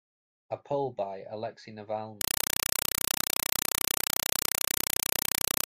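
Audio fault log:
2.21–5.67 s, compressed stream played as audio: from 2.21 s the speech is replaced by loud static chattering at 31.25 Hz. Each 4 ms burst is followed by silence, which fits an AC-3 stream fed through without decoding. Broadband hiss would be continuous rather than gated like this.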